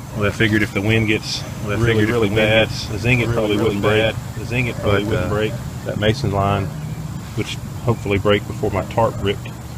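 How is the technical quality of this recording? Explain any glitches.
There's one real problem here. From 1.47 s to 5.87 s there's a doubled audio track: a second full-band copy trails about a second and a half behind, around 5 dB quieter, with no decay or room colour. It likely comes from a slower second capture path or an edit holding two copies out of step. It cuts in and out abruptly at both ends.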